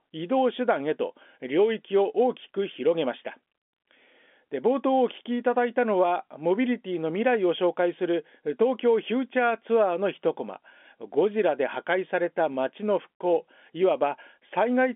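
No technical faults can be heard in this speech.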